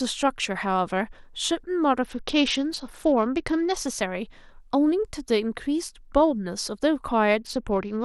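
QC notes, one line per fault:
2.03–3.77 s and 7.4 s to the end, Bluetooth SBC bit pool drop: treble dulls and gritty noise rises together, which fits the bit pool falling from about 28 to 9 (near 78 kbps) on a congested link. Simple low-pass filtering would dull without adding grit.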